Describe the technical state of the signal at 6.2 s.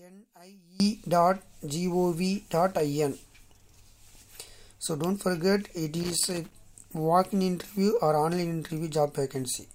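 A worn or dirty contact is making and breaking from 6.0 to 6.53 s, chopping the signal: loose connector crackle, heard as irregular scratchy bursts.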